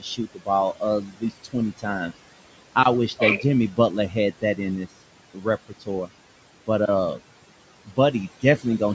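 Noise suppressor artifacts run through the whole clip: the suppressor pulls the room noise, which sits roughly 16 dB under the speech, down by about 18 dB in the gaps and lets it rise under the talking.

The suppressor also cuts into the speech itself. From 0.0 to 2.1 s it mistakes parts of the speech for noise and turns them down by up to about 18 dB, for something like 0.7 s in all. The same happens more briefly at 4.09 to 4.88 s (about 12 dB), 5.34 to 6.1 s (about 17 dB) and 7.85 to 8.81 s (about 18 dB). Those bits sound swallowed or faint.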